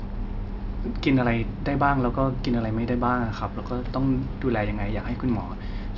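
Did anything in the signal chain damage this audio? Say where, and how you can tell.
No, nothing damaged this audio.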